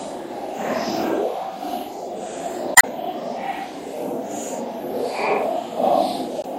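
Throughout, the treble stops at a flat ceiling and faint detail flickers in and out, giving a watery, swirly texture; a spectrogram shows a hard top edge with patchy holes, likely MP3 compression at a low bitrate near 64 kbps. Damaged data in the compressed stream causes a brief disruption from 2.73 to 2.85 s and again from 6.41 to 6.45 s, where the decoder loses frame sync, visible as abrupt waveform discontinuities.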